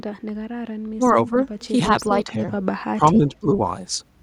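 Speech suppressed in double talk at 0.97 to 1.34 s, 2.25 to 2.35 s and 2.95 to 3.48 s: the speech dips in broken pieces, by roughly 10 dB, then about 15 dB in the last stretch, likely an echo canceller unable to tell the local talker from overlapping loudspeaker echo and turning both down.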